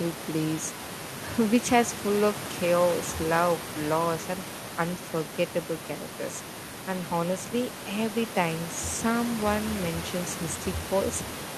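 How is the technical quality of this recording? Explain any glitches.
No glitches can be heard in the recording, and the only thing beneath the speech is the background noise of the room itself, sitting about 13 dB below the speech level, which comes from the space around the microphone rather than from anything going wrong in the signal chain.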